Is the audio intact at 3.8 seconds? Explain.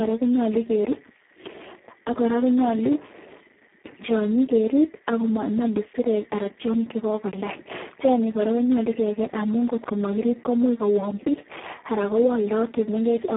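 No. At 3.8 s, as throughout, the Speex codec damage is heavy: the speech sounds noisy and hoarse, which fits a very low bitrate around 4 kbps that leaves too few bits for the excitation. The band is narrowed to a 250 to 3400 Hz line, with nothing above 3.8 kHz.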